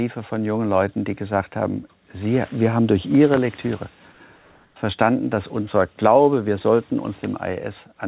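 From 4.12 to 4.20 s and from 4.36 to 4.76 s, the background gives way to a smoother synthetic noise, about 4 dB and then about 2 dB quieter. This is comfort noise in place of the background, likely discontinuous transmission filling gaps judged silent.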